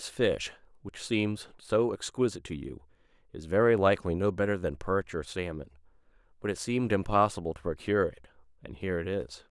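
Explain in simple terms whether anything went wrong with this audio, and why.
Nothing went wrong here: the speech comes through steady and natural from beginning to end, with nothing breaking in to spoil it.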